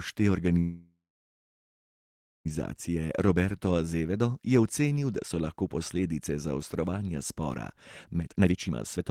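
At 0.59 s the speech stops and a call audio freeze holds until 2.47 s. The last sound smears into a fading buzz, then about 1.5 s of silence, likely packets stalling and the jitter buffer running dry. It picks up right where it left off, so nothing's lost, just delayed.

From 8.19 s to the end at 9.10 s there's a jitter buffer speed-up. The receiver trims tiny pitch-period slices over and over to shed about 0.4 s of backlog. Playback runs at about 146% speed with pitch unchanged, so that stretch sounds rushed.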